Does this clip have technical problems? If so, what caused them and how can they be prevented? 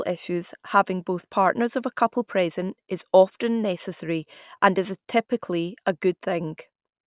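No, no technical faults are audible.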